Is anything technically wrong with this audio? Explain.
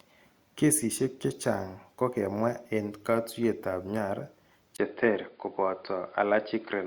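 Yes. At 4.77 s the sound turns dull and boxy after a 20 ms gap, with nothing above 4.9 kHz and a faint new noise floor roughly 40 dB down, at about the same level. That's likely the input switched to a poorer device.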